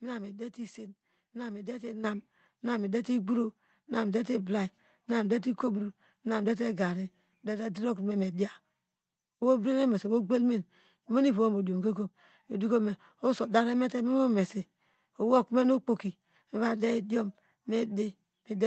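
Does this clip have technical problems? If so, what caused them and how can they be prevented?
Yes. At 2.04 s the whole sound jumps up by about 8 dB in a single step, with the speech and the background noise both getting louder at once and staying at the new level. This is a microphone volume step-up: the call software judged the input too quiet and raised the device's input gain in one step mid-stream, so everything the microphone picks up is lifted equally. To prevent it, turn off automatic microphone level adjustment and set the input gain correctly before the call starts.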